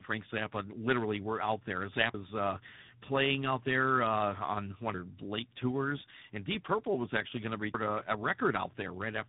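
From the start the speech sounds rough, muffled and warbly, with nothing above 3.9 kHz. This is tandem speech coding: the signal appears to have passed through two speech codecs in a row, consistent with an AMR-NB leg handing over through G.711 A-law to a G.726 leg. Each time the call crossed a border it was decoded and re-encoded, so every coder worked on the previous one's errors. The damage piles up into a thicker, grainier sound than either coder would produce alone.

At 2.14 s, right after "were out there", the sound skips forward and lands on "uh playing out there" with no gap between them. It happens again at 4.94 s, just before "late tours and", and at 7.74 s, just after "was actually going to". Each jump drops around a fifth of a second, and the joins are abrupt. The regular spacing points to audio missing between chunks, likely from a recorder or processor handling the stream in 3-second blocks and losing a short stretch each time it closed one block and opened the next.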